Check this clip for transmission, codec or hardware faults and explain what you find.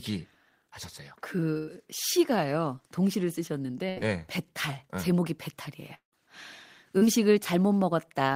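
The clip has four network-related faults: two packet-loss bursts, one dropout and one short concealed loss.

At 1.57 to 1.69 s and 3.89 to 3.98 s, the speech freezes into a fading held buzz or hiss, then jumps ahead. This is a burst of packet loss: about 100 ms and 80 ms never arrived, and the receiver stretched the last sound to fill each gap.

At 5.94 to 6.14 s, the speech turns into a fading buzz or hiss and then falls silent before returning, with about 180 ms gone. This is likely a long network dropout, with concealment giving up partway through.

At 6.98 to 7.03 s, there is a brief smear lasting about 30 ms. This is short concealed packet loss, where the decoder extrapolated from the preceding sound and blended back into the real audio.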